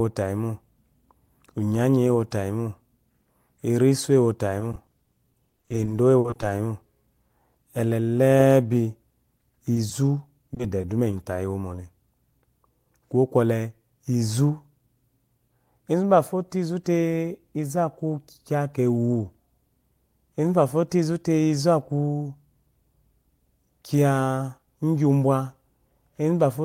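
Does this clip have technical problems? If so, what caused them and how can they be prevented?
Yes. Repeated packet loss (robotic sound) runs from 4.60 to 6.51 s, where roughly thirty holes, the longest 50 ms, are patched by stretching the preceding sound. Concealment fills about 430 ms, close to a quarter of that stretch. A shorter burst from 10.54 to 11.13 s fills about 70 ms across a few gaps of up to 20 ms. Because the holes come back to back, the sound turns choppy. A single dropout would sound different, as one isolated smear. A steadier network path with a deeper jitter buffer would prevent this.

Short concealed packet loss occurs at 9.74–9.77 s and again at 9.89–9.92 s, each filling 20 ms. The receiver continued the last sound through each hole and then blended back into the real audio, leaving a brief smear or wobble. These are isolated events, not the sustained robotic chop of the bursts, and the holes are concealed, not left as silence. 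Reducing network congestion, or enabling forward error correction, would prevent these losses.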